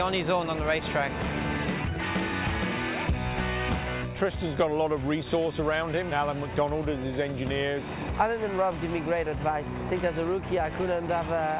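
Nothing stood out on listening to this audio, which carries the narrow telephone-style bandwidth of a call path with nothing above 4 kHz.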